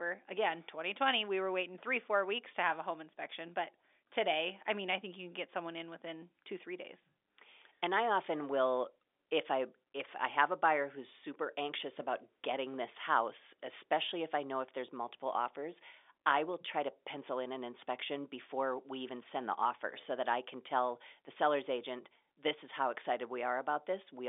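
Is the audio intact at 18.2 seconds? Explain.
Yes, at 18.2 seconds the audio is intact, with only the narrow 300 Hz to 3.6 kHz band of the G.711 telephone coding that carries it.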